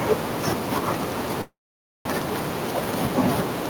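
Throughout, an echo with no canceller shadows the speech about a third of a second later, roughly 14 dB quieter and thinner, like the far end's loudspeaker feeding its microphone. From 0.87 s to 3.67 s a train of clicks ticks at an uneven pace, about five per second and around ten in total, some peaking well above the speech. Likely interference or a faulty connection is to blame. From 1.41 s to 2.07 s a call audio freeze stretches the last sound into a fading buzz, then roughly half a second of silence. Speech resumes where it stopped, 638 ms late, with nothing lost, the likely result of delayed packets draining the jitter buffer.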